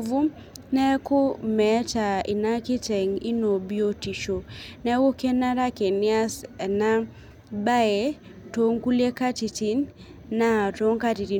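Nothing in the speech stood out as a technical fault on listening.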